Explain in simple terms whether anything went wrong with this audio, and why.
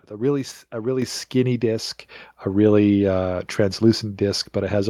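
Something did go wrong: the microphone volume stepped up twice. At 1.02 s, right after "a really a", the level jumps up suddenly, and at 2.04 s, just before "a really uh", it jumps again, a bit less than the first time. The call software decided the mic was too quiet and turned the input up in one go, so the voice and the background noise both get louder at the same instant.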